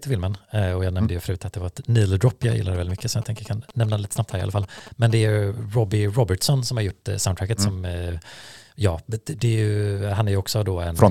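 From 2.28 s to 5.12 s the speech carries GSM signalling bursts, ending just before "det är". A nearby 2G phone is transmitting short groups of radio bursts while it signals to the network, and the audio circuitry rectifies that RF into the signal path. The result is a galloping dit-dit-dit of brief buzzes repeating at 217 Hz, sitting around 15 dB below the speech.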